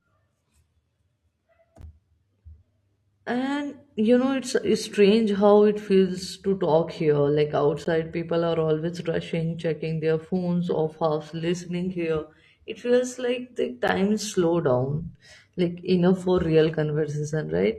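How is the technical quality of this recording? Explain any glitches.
The recording has one recurring glitch. At 1.81, 7.85 and 13.88 seconds the speech drops into brief hard-edged silences of about 12 to 16 ms, spaced six seconds apart. This is a gap between stream segments: segment timestamps leave a hole the player fills with silence, and no audio is lost.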